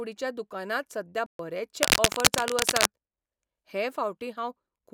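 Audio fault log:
1.26–1.39 s, playback stall. The speech cuts out in mid-flow and the output drops to silence for about 130 ms. The speech then resumes. A gap this clean, with no fade or noise, sounds like the output simply had nothing to play. The likely cause is the player running dry of buffered data, or its audio thread being held up, until it caught up and carried on.
1.83–2.87 s, cable scratch noise. For about a second, dense, uneven bursts of crackle and rustle sit over the speech, roughly 5 dB louder than the speech itself. The noise is irregular rather than steady, which is why it reads as scratching. This likely comes from a worn cable, connector or control being moved, so its contact resistance jumps about rapidly and injects noise into the signal.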